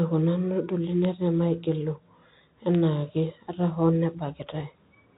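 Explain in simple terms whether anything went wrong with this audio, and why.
Bit errors on a digital phone line hit this speech. A few stored bits were flipped, each spoiling a single sample, at about 1.05 s and again at about 2.75 s, over the narrow telephone-band sound of the line.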